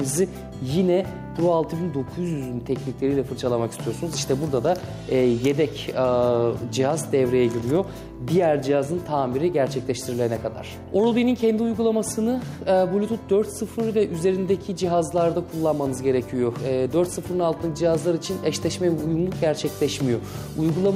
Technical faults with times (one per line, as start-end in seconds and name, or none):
0.00-20.95 gain pumping